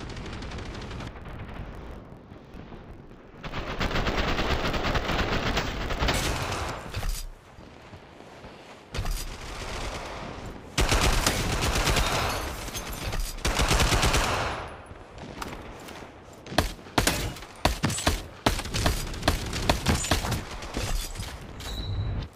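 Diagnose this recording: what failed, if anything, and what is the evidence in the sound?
Sample-format conversion fault: interleaved audio read as planar, 1.08–6.15 s. Half-blocks play at half speed, so the sound drops an octave; the spectrogram shows harmonics striped every 23 ms, fitting 1024-sample blocks.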